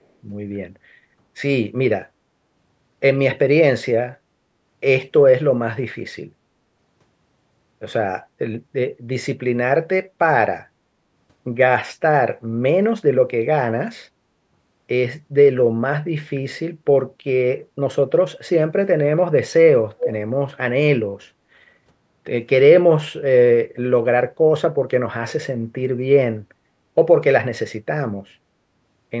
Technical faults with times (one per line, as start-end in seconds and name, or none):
19.98-20.13 echo leak